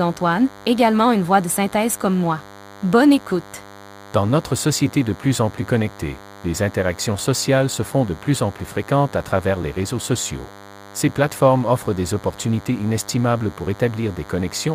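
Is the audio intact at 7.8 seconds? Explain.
No. At 7.8 seconds, as throughout the clip, a steady, thin buzz sits under the speech, pitched at 100 Hz and rich in harmonics, sitting roughly 20 dB below the speech. This is DECT cordless phone buzz: a nearby DECT handset or base station transmits a short radio burst every 10 ms, and the audio circuitry rectifies those bursts into an audible signal repeating 100 times per second.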